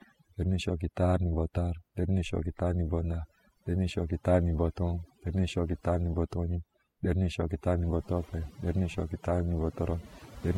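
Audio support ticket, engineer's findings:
Overdone noise removal, whole clip. Background pulled down, breaking up into twinkly specks. Denoiser set way too hard: it's gating individual frequency bands near its noise estimate and taking the quieter bits of the voice with them.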